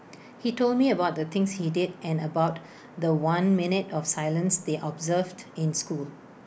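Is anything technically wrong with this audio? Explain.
No, no technical faults present.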